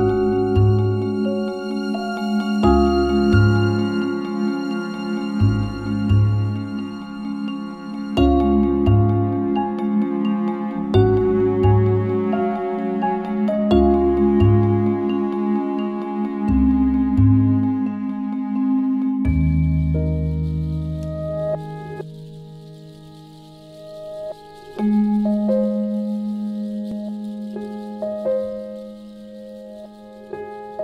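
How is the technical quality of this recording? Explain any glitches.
The technical quality of this recording is good, with no glitches to explain.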